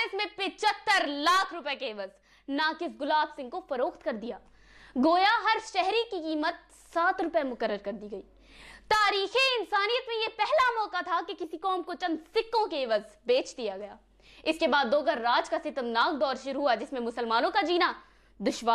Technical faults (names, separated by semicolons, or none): none